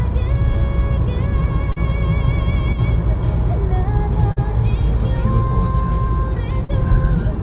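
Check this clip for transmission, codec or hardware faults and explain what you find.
Two kinds of fault are present. There are three short concealed packet losses and one brief channel dropout. The band stops at 4 kHz throughout, which fits a narrowband telephone codec on the call path.

Short concealed packet loss occurs at 1.72, 4.32 and 6.64 s. Each time, about 40 ms of audio failed to arrive in time. The receiver covered each gap for roughly 41 to 43 ms. It extended the preceding sound and then crossfaded back into the real signal. You hear a quick smear or wobble.

One channel drops out from 2.73 to 2.78 s. For those 57 ms the level falls abruptly by about 6 dB, then recovers. That step is the likely result of one stereo channel vanishing before the mono mix. Content shared by both channels drops to half amplitude. Anything only in the missing channel disappears entirely. It sounds like a sudden brief dip.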